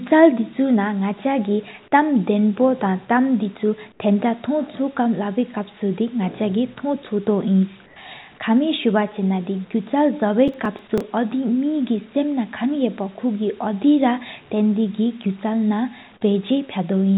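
At 3.92 to 4.0 s and again at 7.86 to 7.96 s, the background is replaced by smooth, featureless hiss about 2 dB quieter. This is comfort noise in place of the background, likely from discontinuous transmission, and unlike a dropout the speech itself is untouched.

At 8.38 s a brief 20 ms patch of that same steady noise replaces a moment of the sound. This is sound dropped by the voice detector, which likely mistook that sound for background.

From 10.48 to 11.01 s a gritty crackle rides on the speech. This is processor overload crackle: about seven missed deadlines, skipped outright, with a buffer of roughly 1.5 ms. Its rapid scattered ticks distinguish it from a single dropout.

Throughout, nothing is heard above 4 kHz, consistent with a telephone-band codec on the call path.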